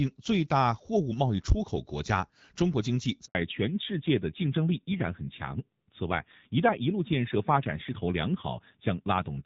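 It's a speech clip carried over HD Voice, where the AMR wideband codec sounds pretty clean at first. At 3.25 s there's a handover gap: the call jumps networks and the audio drops out completely for about 100 ms. From 3.35 s to the end comes a fallback to narrowband. Nothing above 4 kHz survives, so it turns dull and a bit rough, which fits a drop to AMR-NB at around 7.4 kbit/s.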